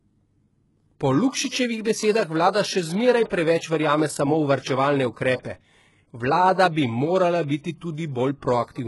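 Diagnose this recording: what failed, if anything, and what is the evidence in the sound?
The codec stage failed: the speech carries HE-AAC compression damage from start to finish, heavy enough to point to a very low bitrate near 12 kbps. The treble sounds bright yet synthetic, with s sounds gritty and lispy, and nothing survives above 11.5 kHz. This is likely spectral band replication: only the lower band is truly coded, and the top is copied up from below under a coarse envelope. A plain low-pass filter would sound dull rather than metallic.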